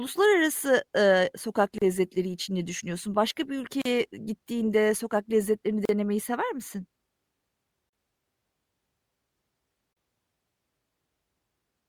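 Gaps at joins of encoded pieces break the speech every 2 s: at 1.78 s (33 ms, after "ııı sokak"), then 3.82, 5.85, 7.89 and 9.93 s (38 ms each). Separately encoded segments were joined untrimmed, leaving encoder delay and frame padding as brief gaps with smeared edges before the speech carries on.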